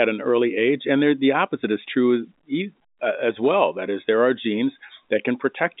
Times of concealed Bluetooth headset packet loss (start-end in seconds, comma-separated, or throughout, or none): none